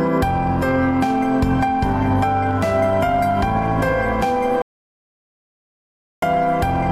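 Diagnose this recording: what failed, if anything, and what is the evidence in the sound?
The input stage failed: an audio dropout to silence runs from 4.62 s to 6.22 s, about 1.6 s of sound lost, before audio resumes mid-flow. The sound stops abruptly and returns just as abruptly, with no room tone in between. On a waveform the trace collapses to a flat, near-silent line; a spectrogram shows a fully black band across all frequencies. The likely cause is a lost input, such as a disconnected device or dropped link, while recording continued writing silence.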